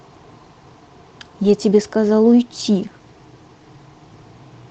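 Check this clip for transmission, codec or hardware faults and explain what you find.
Two brief faults turn up, both of one kind: a lost packet rebuilt from error correction. The first runs from 1.45 to 1.47 s, the second from 2.59 to 2.61 s. Each spans 20 ms, a single Opus frame. The original packet never arrived. The next packet carried a low-bitrate backup copy, and the decoder played that instead. So no gap opens. Each 20 ms patch sounds rougher and noisier than the speech around it, within the call codec's band, which tops out near 8 kHz.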